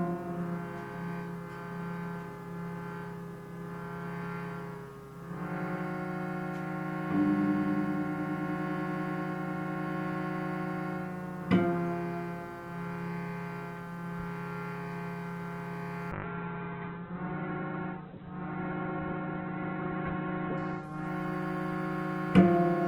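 A call bitrate drop starts at 16.13 s and lasts to the end of the clip. The encoder falls from a rate that fits about 48 kbps to about 7 kbps, staying lowest for about 4.0 s. The bandwidth collapses from 20 kHz to 4 kHz, so the sound turns muffled and rough, with coarse, watery coding.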